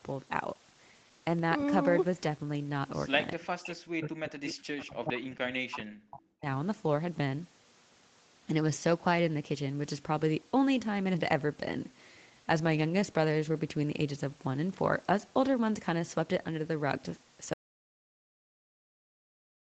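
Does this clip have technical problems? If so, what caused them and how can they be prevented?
Yes. From 3.9 to 6.47 s the speech repeatedly sinks and breaks up, about two seconds of it in total, with the deepest dips falling roughly 40 dB. The likely cause is speech suppressed in double talk: with both parties talking, the echo canceller could not tell this talker from loudspeaker echo and attenuated everything. On a waveform the envelope collapses in ragged notches, and a spectrogram shows the harmonics thinning out or vanishing. Tuning the canceller's double-talk detector, or using headsets, prevents it.

Inside that stretch, from 4.48 to 4.52 s, a brief scrap of sound arrives 398 ms behind the original, around 10 dB quieter. This is most likely an echo leak: the far end's loudspeaker sound reached its microphone and was not fully cancelled before being sent back. A spectrogram shows a faint, short copy of an earlier harmonic pattern offset by about 0.4 s. 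Headphones at the far end or better acoustic echo cancellation would stop it.

At 17.53 s the sound cuts off abruptly and stays in total silence to the end, with no room tone at all. That points to an audio dropout to silence, likely from an input device or link failing while the recorder kept writing silence. The waveform becomes a flat line and the spectrogram turns uniformly black. Monitoring the input and securing cables or connections prevents it. The call path's band limit at 8 kHz is normal.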